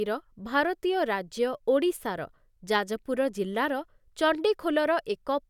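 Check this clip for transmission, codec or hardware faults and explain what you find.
No faults found.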